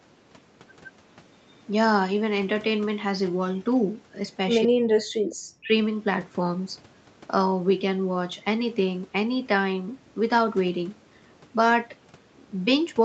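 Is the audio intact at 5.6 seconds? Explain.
No. From 5.49 to 5.72 s the speech abruptly sinks, dropping by around 40 dB at its deepest, for about a fifth of a second. This is likely speech suppressed in double talk: with both sides talking, the echo canceller mistook this talker for loudspeaker echo and turned it down.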